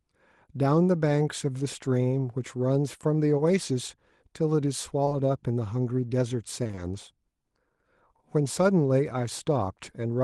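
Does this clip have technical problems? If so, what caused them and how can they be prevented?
Yes. There is short concealed packet loss at 3.37–3.41 s and again at 5.05–5.13 s, where two losses run back to back. Each hole is about 20 ms of audio that arrived too late. The decoder extended the preceding sound to cover it. This leaves a brief smear or wobble. Prevention: a steadier network path and forward error correction let the receiver rebuild lost packets instead of guessing.

Repeated packet loss (robotic sound) hits 6.63–6.79 s. Four separate gaps, each up to 20 ms, fall within that stretch, so half of it is filled in. Patch follows patch with short stretches of real audio between. The result sounds choppy. Prevention: reduce network congestion and allow a deeper jitter buffer so late packets still arrive in time.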